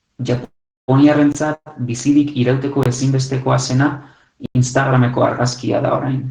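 It's a speech recording with two kinds of trouble. First there's a call audio freeze at 0.44 to 0.90 s and again at 1.54 to 1.68 s. The sound hangs on and fades, going fully quiet for roughly 360 ms in the first one and about 40 ms in the second. Then it picks up where it left off, so nothing is lost, but the timing gets pushed back by 438 ms and 116 ms. That's likely packets arriving late and the jitter buffer running dry. Separately, you get blocks of digital silence, hard cuts to silence. The ones at 1.32 s and 2.83 s last about 23 ms each, which fits a 1024-sample buffer not being filled in time. The one at 4.46 to 4.55 s runs about 93 ms and is a proper little hole, consistent with a 4096-sample block.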